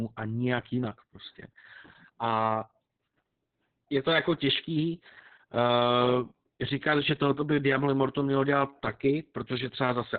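Throughout the clip, Opus voice compression is running its SILK linear-prediction coder in narrowband mode, at what sounds like about 6 kbps with long frames. Nothing is left above 4.5 kHz, so the speech comes out muffled, hoarse and slightly robotic.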